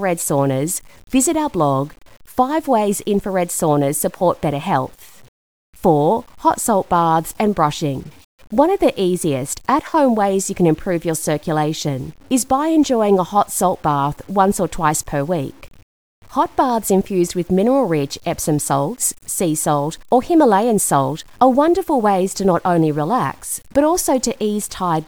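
A speech recording carrying grainy distortion from start to finish. The distortion tracks the speech, sitting roughly 35 dB below it, and quiet passages turn gritty. The likely cause is low bit depth without dither, with truncation that fits an 8-bit word length leaving error that follows the waveform.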